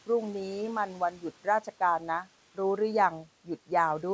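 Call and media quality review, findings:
Speech cut by the noise suppressor, 0.87–1.24 s. Parts of the speech dip by about 11 dB, roughly a fifth of a second in total. Consonants and endings sound swallowed. Suppressor misread low-level speech as noise and gated it.

Same fault, 1.44–1.81 s. Again about 11 dB down, roughly a tenth of a second affected. Faint, clipped-off detail. Room noise sits about 21 dB under the speech. Nothing above 8 kHz, which fits G.722 wideband.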